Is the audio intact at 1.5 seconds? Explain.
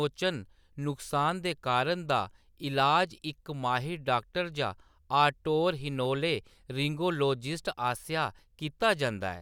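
Yes, at 1.5 seconds the speech plays through cleanly, with no dropout, click, distortion or other fault.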